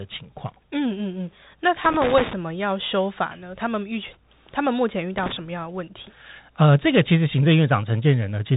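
From the start, the speech carries the Bluetooth CVSD headset codec. This narrowband scheme codes each sample as a single up-or-down bit and adapts its step size. The sound fits a 64 kbps link, and the damage is plainly audible. Nothing passes above 3.8 kHz, so a spectrogram shows a hard ceiling there. Below that ceiling, a granular hiss fills the gaps. Sibilants turn scratchy and loud bright moments distort where the step cannot keep up.

From 1.84 to 2.33 s, and again from 5.18 to 5.32 s, loose connector crackle breaks in. A worn or dirty contact is rapidly making and breaking, which chops the signal into an irregular burst of scratching. On the waveform, each burst appears as a cluster of sharp spikes and dropouts. On the spectrogram, each shows as broadband vertical streaks spanning the whole band.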